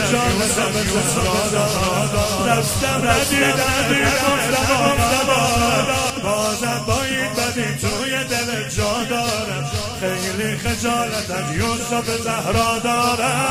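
From the start until 6.1 s, a doubled audio track is heard. A second full-band copy trails about half a second behind, at roughly the same level. It has no decay or room colour. It cuts off abruptly at 6.1 s. The likely cause is a second, slower capture path.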